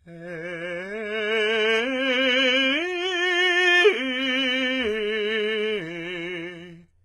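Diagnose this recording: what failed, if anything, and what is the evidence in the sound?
The damage sits at the codec stage, throughout the music: treble up to a hard ceiling near 11.7 kHz sounds grainy and metallic, with harmonics that fail to line up above the crossover. This is likely HE-AAC compression rebuilding copied bands, heavily, at a bitrate around 16 kbps. Plain low-pass filtering would dull the top instead.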